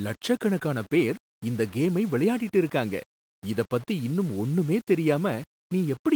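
From start to end, the speech carries a grainy, gritty distortion. It points to low bit depth without dither, likely a signal rounded to about 6 bits. Each sample snaps to a coarse step, and nothing randomises that error. So the grit follows the sound itself, sitting only about 25 dB below it. Quiet stretches turn rough and sputtery. The Opus voice compression underneath stays light and full-band.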